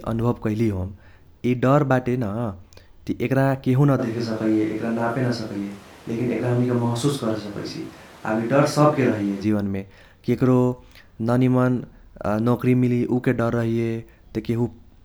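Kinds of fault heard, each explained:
Switch to a distant microphone: from 4.0 to 9.4 s the speech abruptly turns roomy and hollow, likely because a farther microphone replaced the close one. At unchanged loudness, the spectrogram shows thinner lows, smeared reverberant tails and a noise floor about 25 dB down.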